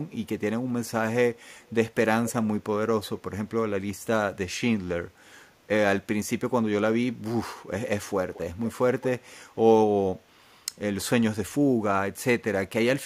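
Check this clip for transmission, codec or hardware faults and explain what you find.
I found one kind of fault, an echo leak, which occurs five times: at 1.62–1.70, 2.26–2.33, 8.34–8.40, 8.64–8.68 and 9.01–9.08 s. Each is a short repeat of the speech arriving about 220–240 ms late. It is barely audible near 1.6 s and fairly clear near 9.0 s. The likely cause is a far-end loudspeaker whose echo canceller let part of its microphone pickup slip back. A spectrogram shows weak copies of earlier harmonic patterns shifted about a quarter second later. The waveform shows small matching bursts.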